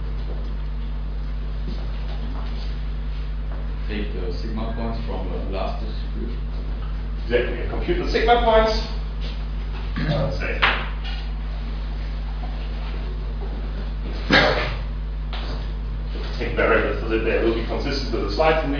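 No technical faults are audible anywhere in the recording.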